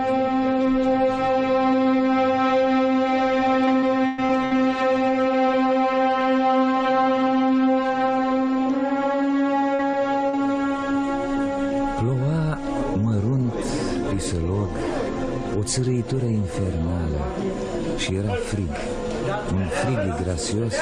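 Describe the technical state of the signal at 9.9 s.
Right around there you get short concealed packet loss, in two bursts: about 40 ms went missing from 9.75 to 9.81 s, then roughly 20 ms more from 9.91 to 9.95 s. The receiver bridged each gap by extending the preceding sound, carrying its pitch forward or padding it with shaped noise, then cross-fading back into the real signal. You hear it as a quick smear or tiny wobble, and a brief transient can simply drop out.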